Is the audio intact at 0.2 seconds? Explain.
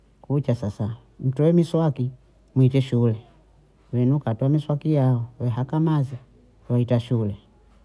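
Yes, the audio at 0.2 seconds is intact, with no fault there.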